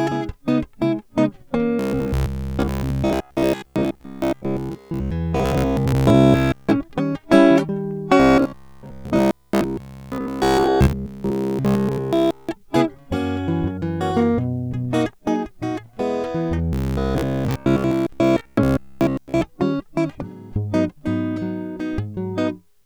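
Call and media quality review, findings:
Robotic sound from repeated short buffers at 1.79–5.11 s, 5.37–6.72 s, 8.20–12.49 s and 16.73–19.41 s. Music turns into a rigid metallic buzz at 66.7 Hz, which fits a repeated 15 ms block. Likely an audio underrun in the playback or jitter-buffer path. The last block is looped while real audio is skipped: most of it in three spans, all of it at 8.20–12.49 s.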